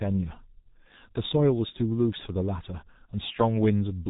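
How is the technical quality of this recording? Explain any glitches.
Quality is poor throughout. The G.723.1 codec runs across the whole clip at 6.3 kbit/s. It models speech in coarse 30 ms frames and discards everything above 3.8 kHz, so the speech comes across muffled and hoarse, with smeared consonants and heavy coding damage.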